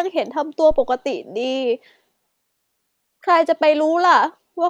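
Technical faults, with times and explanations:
0.71 to 0.95 s, phantom power thump: a supply was switched on a live microphone input, and that DC step passed through the coupling capacitors as a single deep thump peaking at about -17 dBFS, its low-frequency energy dying away in roughly 53 ms.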